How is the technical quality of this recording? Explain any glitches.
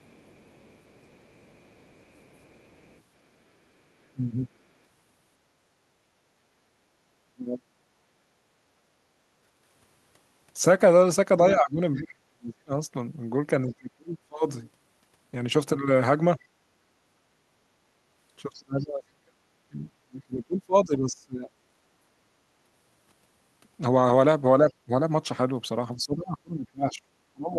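The recording has echo-control problems throughout, mostly speech suppressed in double talk, plus echo leakage and background gating.

Other side's voice leaking through, 0.0 to 3.01 s and 11.95 to 13.74 s: the echo canceller likely left residual loudspeaker echo, so a faint second voice sits roughly 30 to 35 dB below the talker.

Speech suppressed in double talk, 4.0 to 7.74 s, 11.55 to 14.38 s, 18.58 to 21.55 s, and 24.63 s to the end: when both sides talk at once, the canceller likely turns everything down. The talker's voice dips by as much as 30 to 35 dB, in brief pieces early on and for longer spans later.

Background gated by the echo canceller, 6.33 to 8.48 s: the canceller clamps the microphone during loudspeaker playback, so the room sound drops by about 12 dB in short gaps totalling around 150 ms.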